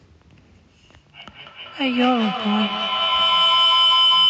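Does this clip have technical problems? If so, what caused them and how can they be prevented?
Yes. A feedback howl begins at 1.21 s: a microphone and loudspeaker formed a loop that gained level on each pass. It narrowed to a tone around 3 kHz, pulsing roughly every fifth of a second, reaching about 2 dB above the speech, and continuing to the end. To prevent it, mute all but one device in a shared room or use headphones.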